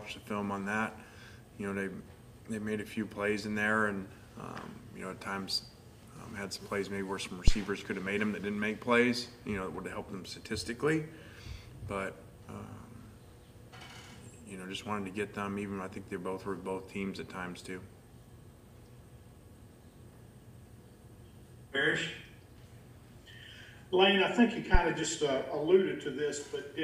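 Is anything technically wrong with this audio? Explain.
Yes. Two phantom power thumps occur, at 7.48–7.58 s and 24.75–24.81 s. A supply switched on a live input sends a DC step through the coupling capacitors, giving deep low-frequency thumps peaking near about −9 and −10 dBFS that decay within 23 ms and 14 ms.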